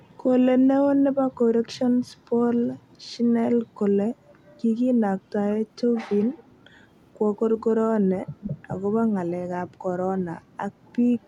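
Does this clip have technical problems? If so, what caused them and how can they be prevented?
Yes. Brief echo leak occurs at 6.37–6.44 s, 8.42–8.50 s, 10.88–10.92 s and 11.22 s to the end, each a copy of the speech trailing by 439 ms. The copy at 8.42 s is the most audible, about 10 dB below the speech; the others sit near 30–35 dB down. The likely cause is a far-end loudspeaker whose echo canceller let residual pickup through. Headsets, or a correctly converged echo canceller with adequate tail length, prevent it.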